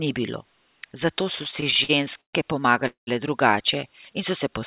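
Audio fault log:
1.36–2.35 s, repeated stalls (stutter): over about a dozen brief holds, the audio keeps stretching its last sound while waiting for late packets, because the jitter buffer repeatedly runs dry. About 295 ms is filled in, roughly 30% of the span, with the longest hold 127 ms and nothing lost, so the sound drags and stutters. On a spectrogram, short smeared horizontal bands interrupt the normal patterns; the waveform shows repeated stretches, the longer ones with fading tails.
2.87–3.09 s, call audio freeze: the audio halts and the last sound is held as a fading buzz or hiss for about 196 ms, ending in roughly 130 ms of silence, then it resumes where it stopped with nothing missing. The likely cause is packets delayed in transit, leaving the jitter buffer empty and pushing everything after it about 196 ms later. The spectrogram shows a decaying smear into a blank gap. Here the call path's 4 kHz ceiling, which fits G.711 A-law at 64 kbps, also leaves the band above empty.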